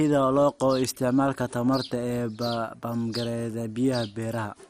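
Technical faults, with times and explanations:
Throughout, MP2 compression. The speech is dull, with a gurgling, granular roughness that is plainly audible. Nothing is present above 15.1 kHz. The likely cause is MPEG Layer II coding at a low rate, such as 64 kbps. This codec divides the sound into 32 sub-bands and shares out a limited bit budget. Starved upper bands drop out or flicker, and the remaining bands are quantised coarsely, leaving that grainy texture.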